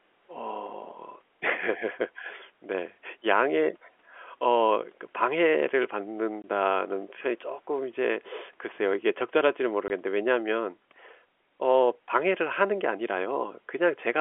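At 6.42 to 6.44 s and again at 9.88 to 9.90 s, the speech drops into a brief hole of dead silence with hard edges. This is packet loss filled with silence: each 20 ms gap fits one lost packet, replaced by nothing, over the narrowband telephone line.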